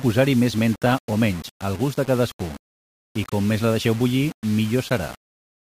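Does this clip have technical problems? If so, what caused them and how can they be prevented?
Yes. Throughout the speech there is grainy distortion that tracks the signal, with quieter passages turning gritty and sputtering, likely from low bit depth without dither: rounding to about 5 bits puts the error only about 20 dB below the speech. Prevent it by keeping at least 16 bits and dithering any reduction.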